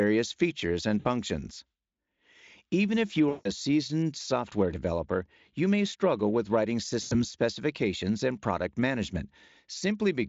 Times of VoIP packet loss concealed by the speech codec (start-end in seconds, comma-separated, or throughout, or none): 0.99-1.07, 3.29-3.48, 7.01-7.25